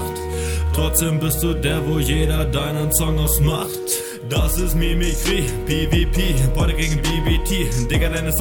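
Nothing here sounds off; the audio runs along with no dropouts, glitches or other technical faults to point to.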